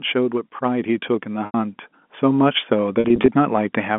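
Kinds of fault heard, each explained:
Automatic gain rising: The level control judged the input too quiet. From 0.59 s, speech and background swell together, climbing about 8 dB by 3.95 s.
Packet loss with pitch repetition: Missing audio is patched by repeating the last pitch period. At 1.46 s an 80 ms gap fades into silence before speech returns, and from 3.0 to 3.28 s, sound turns briefly held and buzzy.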